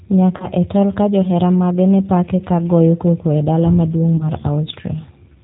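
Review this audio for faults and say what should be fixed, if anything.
The whole clip passed through the G.729 codec at 8 kbit/s, which rebuilds speech from a filter and sparse pulses, so nothing above 4 kHz survives and the speech sounds plainly rough and synthetic. Using a wideband codec such as G.722 or Opus at a higher bitrate would prevent this.

VoIP packet loss concealed by the speech codec occurs at 0.37 to 0.46 s and again at 4.18 to 4.30 s. In each case about 30 ms of audio went missing, which fits a single lost packet. The decoder extrapolated from its last pitch and filter, giving a brief, fading smear that lingers after the gap. Forward error correction, redundancy or a better-provisioned network path would prevent these dropouts.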